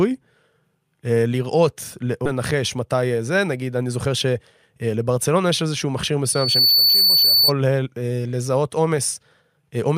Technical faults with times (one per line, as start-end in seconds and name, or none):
2.25 skip ahead
2.80-3.19 jitter buffer speed-up
6.25-7.52 loudspeaker feedback squeal